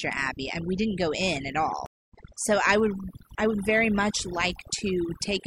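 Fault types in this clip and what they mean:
Overdone noise removal: An aggressive noise reduction stage cuts individual frequency bands hard whenever they sit near its noise estimate, so throughout the speech the background drops and breaks up into twinkling specks, while quieter parts of the voice drop out.
Stream reconnect: The connection dropped and the player restarted decoding mid-stream. After "didn't go in at" the audio falls silent for about 234 ms, from 1.86 to 2.15 s, then resumes roughly a fifth of a second further on at "so I would I".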